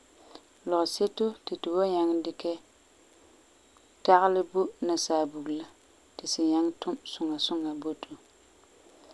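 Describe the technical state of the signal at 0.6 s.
At 0.6 s the speech signal is intact, with no audible technical fault at that moment.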